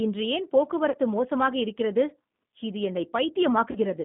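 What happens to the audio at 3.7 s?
From 3.71 to 3.79 s, VoIP packet loss concealed by the speech codec sets in. About 40 ms of speech goes missing, which fits two lost packets. The decoder repeats its last pitch and filter at falling gain, giving a brief stretched, fading sound that stays weak afterward. Underneath, the G.729 codec at 8 kbit/s keeps the line band near 150 Hz to 3.6 kHz, with a rough, synthetic edge.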